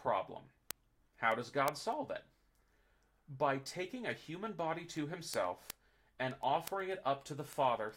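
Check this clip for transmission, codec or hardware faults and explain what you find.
One hardware fault is present: word clock ticks. The receiver runs on its own clock, unlocked from the sender's and drifting at something like 200 ppm, so one sample is dropped or repeated at each slip. From 0.22 s to 7.89 s, sharp ticks of uneven strength land over the speech about ten times a second, some seventy in all.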